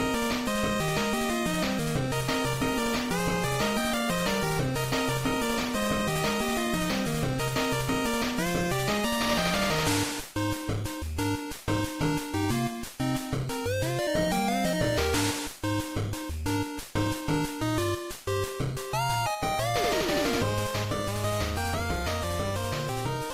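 From 2.21 s to 8.47 s the audio turns rough and watery, and the top end dulls so it sounds muffled, with the worst stretch lasting about 4.4 s before clarity returns. This is a call bitrate drop: the call's bandwidth estimate fell and the encoder was told to spend far fewer bits, consistent with a fall from around 48 kbps to about 18 kbps. With so little data it codes coarsely and trims the highs until the rate recovers.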